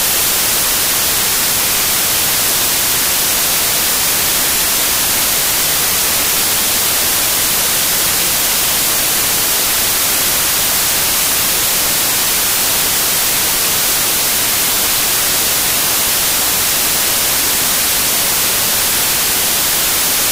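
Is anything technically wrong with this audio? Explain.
Yes. Throughout the clip, the samples are built from the wrong bytes: the reader combines each sample's bytes incorrectly, so the rapidly changing low-order bits end up as the dominant part of every value. The result is loud, harsh broadband noise, close to white on the loud sounds.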